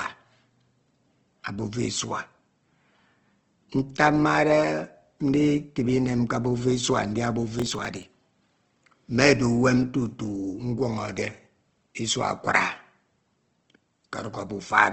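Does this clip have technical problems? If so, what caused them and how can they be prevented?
Yes. Throughout, the speech sounds grainy and rough with nothing above 8.3 kHz, likely Opus compression at about 16 kbps. Encode at a higher bitrate.

From 7.60 to 8.03 s, just after "abufa isua ndia abufa", there's processor overload crackle: about fifteen short buffers, around 10 ms each, get skipped. Reduce CPU load or enlarge the buffer.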